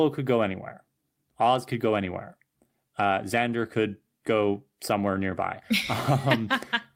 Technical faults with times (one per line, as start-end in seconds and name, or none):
none